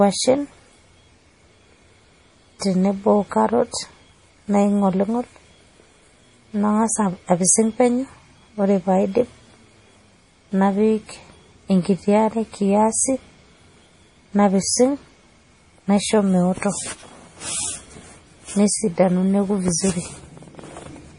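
Throughout, the speech sounds watery and swirly, with metallic chirps on s sounds, smeared onsets and nothing above 10.6 kHz. The likely cause is heavy MP3 compression, fitting about 32 kbps: short of bits, the encoder cut the treble and let weak lines flicker between frames.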